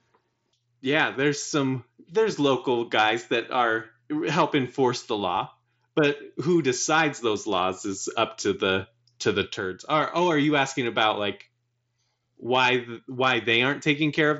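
No faults are audible anywhere in this speech.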